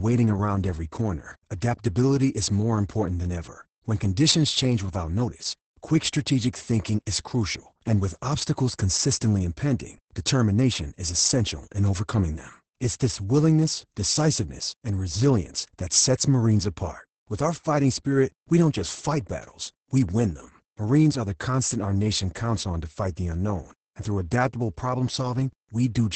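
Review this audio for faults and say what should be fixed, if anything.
Opus voice compression affects the speech from start to finish. Nothing survives above about 8.7 kHz, and the excitation is coded coarsely, so the speech sounds muffled, hoarse and slightly robotic. This heavy damage fits Opus's SILK wideband mode at a bitrate around 10 kbps. To prevent it, encode at a substantially higher bitrate or keep a lossless copy of the recording.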